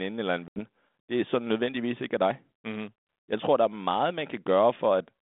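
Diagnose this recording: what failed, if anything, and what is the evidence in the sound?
The failure is at the network stage: packet loss on an ADPCM call. After "eller en", the speech drops out from 0.48 to 0.6 s, about 80 ms of silence, roughly a few packets' worth, and it resumes at "det er sådan nødvendigvis" with some distortion. On a spectrogram this appears as a hard-edged blank column across the 200 Hz to 3.6 kHz line band. In the waveform it is a flat gap with abrupt edges. The G.726 decoder at 32 kbit/s lost its adaptive predictor and step-size state during the gap, so it mis-scales the first samples until it resynchronises over the next few tens of milliseconds.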